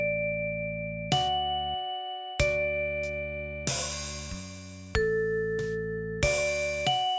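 From start to finish the sound carries aliasing. Content above 8 kHz has been folded back below that line instead of being removed, which fits a drop from a 48 kHz to a 16 kHz sample rate with no anti-alias filter first. The folded energy sits roughly 15 dB under the wanted signal, giving high material a gritty, metallic edge at pitches that bear no relation to the source. An ordinary band limit would just sound dull. Here the spectrum stays busy right up to 8 kHz.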